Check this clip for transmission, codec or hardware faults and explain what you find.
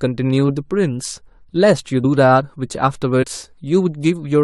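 Compressed frames skipped at 2.03 s and 3.22 s: each time a few whole compressed frames were missing or rejected as damaged, so the speech jumps ahead by roughly 70 ms, which fits about three frames of 23.2 ms.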